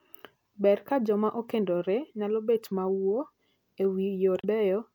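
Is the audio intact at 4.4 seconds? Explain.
No. Damaged data in the compressed stream hits the speech from 4.41 to 4.45 s. Corrupted bytes leave the decoder unable to read those frames, so it loses sync and hunts for the next valid frame header, producing a brief 40 ms chirp or blip.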